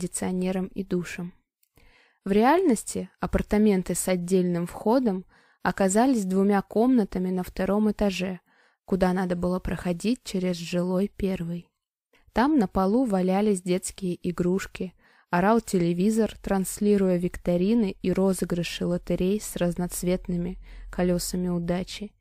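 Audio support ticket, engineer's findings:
No audible faults found in this recording.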